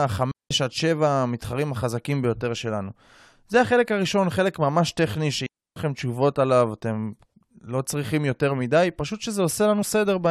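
Right near the start, from 0.32 to 0.51 s, the speech drops into a clean hole of near silence for about 190 ms, and it happens again from 5.46 to 5.76 s, this time for about 300 ms. That's a digital wireless dropout. The receiver lost too much of the incoming data, so it simply muted with a very fast fade rather than passing garbage through. That's why both gaps sound so tidy, with no crackle or noise burst on either side.

Then, close to the end, between 9.81 and 9.83 s, there's a tiny blip lasting about 20 ms. That one is damaged data in a compressed stream. A bit of the encoded data was corrupted, so the decoder couldn't read those frames properly, lost its place and had to hunt for the next valid frame header. What you hear is that short glitch as it stumbles and picks back up.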